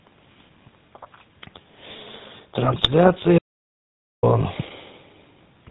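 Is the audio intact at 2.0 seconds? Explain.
No. At 2.0 seconds, as throughout the speech, GSM full-rate codec coding strips everything above 4 kHz and rebuilds the voice from pulse excitation, giving plainly audible buzzy, gravelly roughness.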